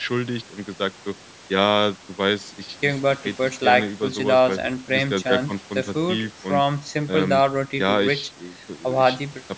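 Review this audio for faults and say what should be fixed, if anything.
Nothing needs to be fixed, since no faults turn up in this speech apart from the ordinary call microphone processing, which keeps everything below 8 kHz.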